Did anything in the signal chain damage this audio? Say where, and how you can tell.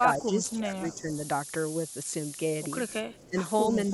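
Yes. At the sample-format conversion stage the audio carries low bit depth with noise shaping for its whole length. A steady, thin hiss sits only about 10 dB below the speech and climbs sharply toward the top of the band. The signal is coded with just 6 bits. The rounding error is fed back and pushed upward in frequency, so the noise piles up in the high end instead of spreading evenly.

In call processing, the speech dips from 0.00 to 1.11 s and again from 3.02 to 3.41 s, falling by roughly 10 dB at its deepest. A smaller dip of about 5 dB runs from 3.68 s to the end. This pattern is likely speech suppressed in double talk. With both sides talking at once, the echo canceller could not separate the near talker from loudspeaker echo and attenuated everything together.

Faint delayed copies of the voice appear at 0.44 to 0.53 s, 2.88 to 2.93 s and 3.10 to 3.27 s. Each sits about 30 dB below the speech and trails it by 272 ms. 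The fixed delay across all three points to echo leak, likely from a far end playing the call on a loudspeaker. That end's canceller left residual microphone pickup, which was sent back down the line.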